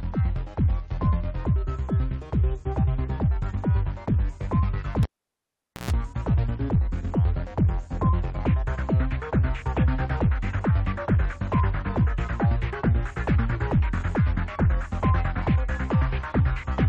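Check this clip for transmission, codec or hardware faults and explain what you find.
One hardware fault is present: a cable pulled and plugged in, from 5.03 to 5.91 s. A pop cuts the signal to near silence for about 0.83 s. While only the plug tip touches, there is a 0.12 s burst of 60 Hz mains buzz, and a second pop marks the reconnection. On a waveform, two sharp spikes bracket a nearly flat stretch. A spectrogram shows vertical broadband lines at each pop and a narrow horizontal band at 60 Hz during the buzz.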